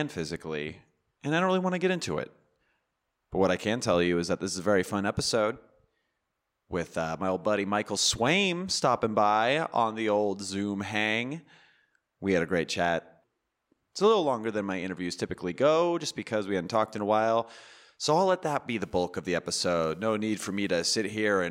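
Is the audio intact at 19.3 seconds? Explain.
No. GSM phone buzz runs from 18.83 to 20.70 s. A nearby phone's 217 Hz radio bursts get rectified, adding a raspy, intermittent buzz about 32 dB below the speech.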